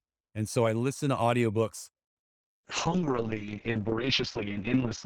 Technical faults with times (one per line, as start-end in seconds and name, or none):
2.50-5.06 call bitrate drop